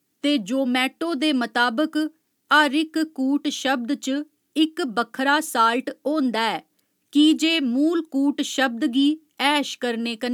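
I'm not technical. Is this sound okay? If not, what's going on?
Yes, nothing here sounds broken or glitchy; it's just someone talking with no technical hiccups to worry about.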